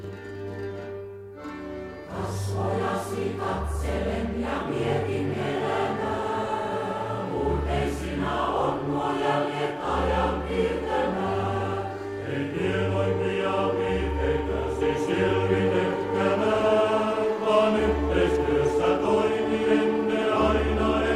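Channel delay (doubling) runs from 0.0 to 14.81 s: one channel arrives about 42.67 ms late, which fits a 2048-sample buffer, and once both are summed to mono that late copy sits at equal level as a distinct doubled image or slap echo.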